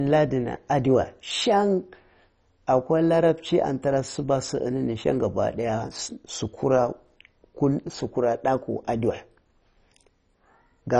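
Throughout the speech there is heavy damage that is likely from MP2 compression. Nothing sounds above 10.3 kHz, and the surviving sub-bands flicker and are coarsely quantised, leaving a dull, gurgling, granular texture that fits a low bitrate around 32 kbps.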